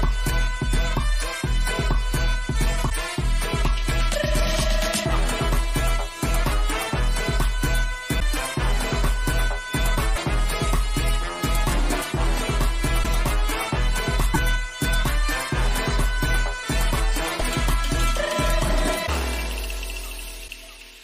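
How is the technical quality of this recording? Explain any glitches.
The recording has eight brief glitches, each about 30 ms long, at 2.89–2.92, 8.19–8.22, 10.15–10.18, 13.02–13.05, 14.33–14.36, 17.39–17.42, 19.06–19.09 and 20.47–20.50 s. The sound jumps ahead abruptly, and the moment just after the jump comes out garbled. The likely cause is a broken MP3 bit reservoir: frames were dropped, so the following frame borrowed data from the wrong bytes and decoded as a glitch lasting about one 26 ms frame. Unlike a plain dropout, the sound skips forward and then garbles, rather than going silent and resuming where it stopped.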